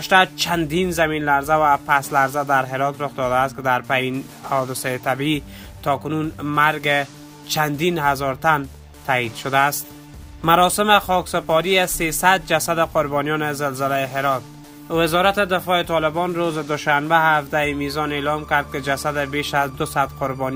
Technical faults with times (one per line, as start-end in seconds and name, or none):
none